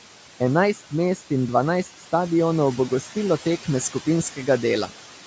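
Noise suppressor artifacts run throughout the speech. The suppressor pulls the room noise down by about 12 dB between phrases, so the background pumps.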